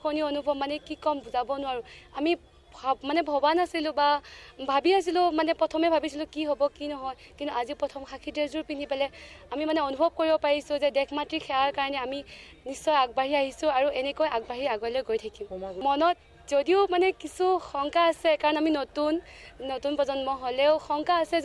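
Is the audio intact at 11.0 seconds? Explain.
No. A resampler restarted on every block runs from 9.7 to 11.4 s, so 11.0 s falls inside it. The rate conversion, which points to 48 kHz being brought down to 24 kHz, handles each chunk in isolation, so at every edge the filter lacks the true neighbouring samples and leaves a small error. Those errors come out as steady ticks at 10 Hz, which fits 100 ms blocks, audible only while sound is present.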